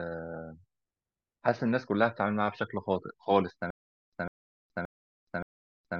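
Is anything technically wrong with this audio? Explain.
Yes. From 3.70 s to the end, the speech breaks into a stutter with silent gaps: a short burst of about 151 ms plays, then about 422 ms of dead digital silence, and the same burst returns four times at an even 574 ms pace. The likely cause is a stalled player or stream that, at each retry, replayed its last buffered fragment and then ran empty, so the audio due in those gaps is lost.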